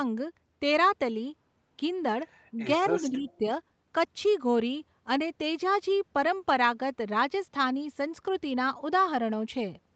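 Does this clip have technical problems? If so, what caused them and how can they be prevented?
Yes. There is speech suppressed in double talk between 2.98 and 3.44 s. The speech dips in level there, by roughly 15 dB at its deepest. Around 0.3 s of the stretch is affected in total. The likely cause is the far end talking at the same moment. The echo canceller could not tell this talker from its own loudspeaker echo, so it turned everything down. To prevent it, use a headset, or an echo canceller with better double-talk detection.

There is also an echo leak from 3.29 to 3.38 s. A brief, very faint delayed copy of the speech comes through, lagging by 259 ms. It sits roughly 35 dB below the speech. This is likely a residue of a loudspeaker's output that the far side's microphone picked up. That side's echo canceller did not fully remove it and sent it back. To prevent it, have the far side use a headset or lower its loudspeaker volume.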